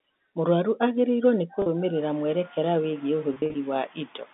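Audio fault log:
1.62 s and 3.34–3.54 s, packet loss with pitch repetition: about 40 ms dropped after "agĩrĩirwo nĩ", then 100 ms in short gaps over 200 ms. Each gap was bridged by looping the last pitch period, so the sound briefly holds on a buzzy tone.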